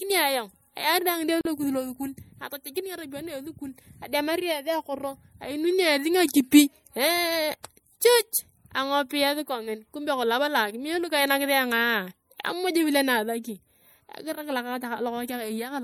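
MP3 compression is plainly audible throughout this speech. Weak detail flickers in and out between frames. The result is a watery, swirly texture with smeared consonants. It fits a likely MP3 encode at around 64 kbps.

At 1.41 s a gap at a join of encoded pieces opens. The speech drops out for about 42 ms, until 1.45 s. Separately encoded pieces were joined with their start delay and end padding left in. The edges are smeared. Then the speech resumes.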